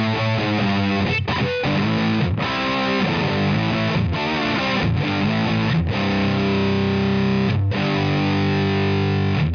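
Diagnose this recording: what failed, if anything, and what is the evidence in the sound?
Nothing in the signal chain points to a failure: the audio holds steady throughout, with no break, level jump, distortion or change in character that would implicate any stage between capture and playback.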